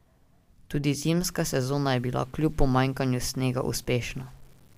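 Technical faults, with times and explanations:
1.25 to 4.78 s: low bit depth without dither. From 1.25 s to the end, the speech turns grainy, with distortion that tracks the signal and grits up quieter passages; the error sits only about 35 dB below the signal. This likely comes from truncation to 8 bits with no dither applied.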